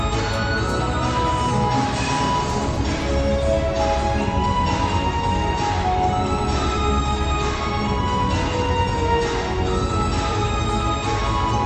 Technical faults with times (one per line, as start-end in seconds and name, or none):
none